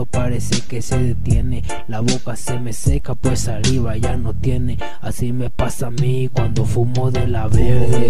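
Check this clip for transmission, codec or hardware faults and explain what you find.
No transmission, codec or hardware faults can be heard anywhere in the signal.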